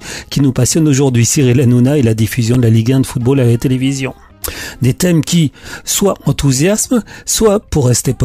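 At 2.54 s there's a block of digital silence, about 5 ms where the samples just drop to zero, probably because the output buffer wasn't filled in time. With no fade either side, it comes across as a single sharp tick rather than an audible gap.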